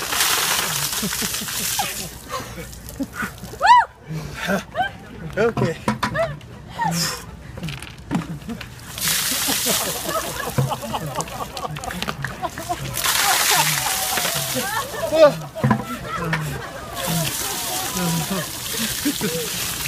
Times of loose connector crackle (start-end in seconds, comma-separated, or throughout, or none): none